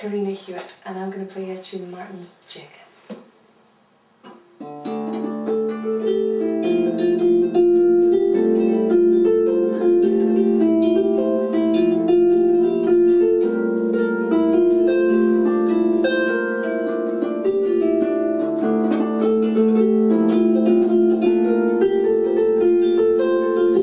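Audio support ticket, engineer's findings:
Nothing stood out on listening, so there are no findings to log against this ticket.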